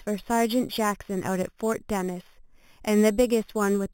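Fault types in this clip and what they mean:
Imaging from sample-and-hold upsampling: the speech was taken from 8 kHz up to 44.1 kHz by just repeating each sample, with no smoothing filter afterwards. That leaves mirrored copies of the spectrum stacked around multiples of 8 kHz, the first one landing between 4 and 8 kHz at about 17 dB below the speech. You hear it the whole way through as a bright, metallic fizz riding on the voice, rising and falling with it, and the lowest copy slides the opposite way to the pitch.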